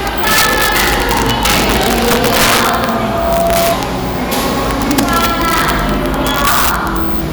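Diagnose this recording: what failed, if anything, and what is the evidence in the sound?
A gain stage in the sample-format conversion wrapped instead of saturating. The signal was driven about 6 dB past full scale, and instead of being held at the limit, every sample that overshot rolled over to the opposite extreme. This integer overflow runs through the whole recording, touching roughly one percent of samples. Each loud peak comes out as a violent, full-range crack, far harsher and more abrupt than ordinary clipping would sound.

The second fault is in the acoustic path, where loudspeaker output leaked back into the capturing microphone and the loop gain rose above one at a single frequency. That loudspeaker feedback squeal starts at 2.58 s as a 676 Hz tone. It swells over roughly 0.7 s until it sits at about the same level as the rest of the sound, then holds as a steady whistle until it stops at 3.79 s.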